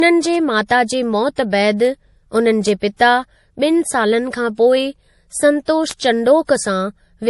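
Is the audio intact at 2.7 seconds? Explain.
No. At 2.69 s there is a bit error spike: a single sample jumps by a power of two and snaps straight back, heard as one sharp, broadband tick. Unlike a dropout or clipping click, it has no gap or flattening and no link to the speech's level or rhythm.

That moment also carries a band-limited MP3 sound. There is nothing above 11.5 kHz, along with the smeared artefacts of a low-bitrate encode. This is likely low-bitrate audio saved at a high bitrate, fitting a 48 kbit/s MP3 re-encoded near 271 kbit/s. A plain low-pass filter would leave the cut-off without those artefacts.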